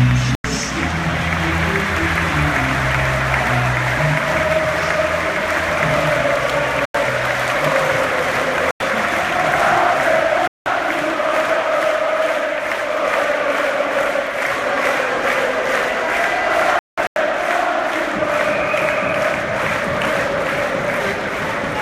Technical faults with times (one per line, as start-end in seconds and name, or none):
0.35-0.44 corrupt frame muted
6.81-6.95 corrupt frame muted
8.65-8.80 corrupt frame muted
10.46-10.66 corrupt frame muted
16.53-17.16 corrupt frame muted